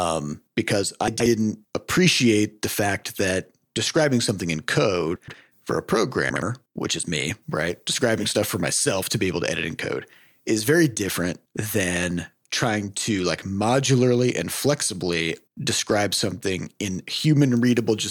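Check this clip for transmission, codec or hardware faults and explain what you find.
The speech has one transmission fault, chunks out of order, which occurs three times. At 1.08 to 1.26 s and at 5.16 to 5.34 s, a 60 ms chunk arrives late and plays two chunks after its proper place. At 6.30 to 6.42 s, one plays a single chunk late. No audio is lost, but each misplaced chunk creates a brief garbled, jumbled moment with hard joins.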